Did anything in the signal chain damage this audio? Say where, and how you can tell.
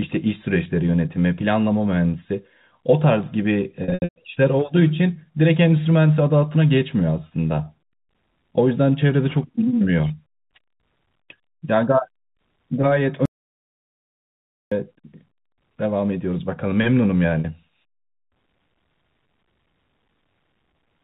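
Yes. At 3.84 to 4.16 s the sound turns briefly held and buzzy, then thins out: about 260 ms is missing, scattered over 320 ms, with the longest run about 120 ms. Brief buzzy catches also occur at 10.08 s (about 20 ms) and at 17.40 to 17.44 s (about 40 ms). This is packet loss with pitch repetition at the network stage. The receiver filled each gap by repeating the last pitch period and fading it out over about 50 ms. The gap lengths fit 20 ms packets.

From 13.26 to 14.72 s the audio cuts out mid-flow for about 1.46 s of silence, with no room tone. It then resumes abruptly over the 4 kHz-limited G.711 telephone band. This audio dropout to silence likely means the input device or link failed while the recorder kept writing silence, so that stretch is gone.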